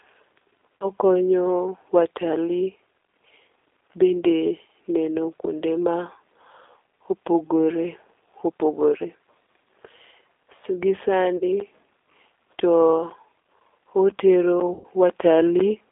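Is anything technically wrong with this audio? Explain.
Yes, there are three kinds of technical fault.

G.729 codec, throughout: the speech is rebuilt at a rate that fits 8 kbit/s G.729A from a vocal-tract filter, a pitch predictor and a few pulses per frame. The band is limited to about 300 Hz to 3.6 kHz. The result sounds thin, slightly rough and synthetic, with plainly audible coding damage.

VoIP packet loss concealed by the speech codec, at 0.78 to 0.87 s, 11.37 to 11.43 s and 14.74 to 14.86 s: audio went missing, 40 ms in the first two gaps and 100 ms in the third. The decoder extrapolated from its last pitch and filter state and faded the gain, so each gap is smeared into a buzzy tone or coloured noise that fades. The speech stays weak briefly afterward.

Periodic USB or driver dropouts, from 11.6 to 15.6 s: about every 0.5 s, roughly 10 ms of audio is replaced by silence, which points to the bus or driver being blocked at a fixed interval. 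There are about ten of these, heard as regular ticks during the speech.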